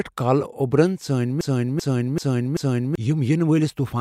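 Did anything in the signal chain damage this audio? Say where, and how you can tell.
Yes, a broken-record loop from 1.41 to 2.95 s: a 386 ms fragment repeats four times, most likely a stalled playback buffer resending its last block.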